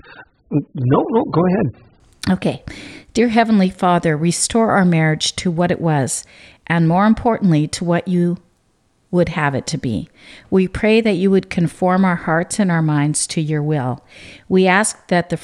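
Adaptive stream starting at a low bitrate, 0.0 to 2.0 s: the player began on a very lean version to start quickly. The speech is dull, with nothing above 4.9 kHz, and artefacts are heavy. At 2.0 s it switches to a much better stream, and the quality jumps with no gap.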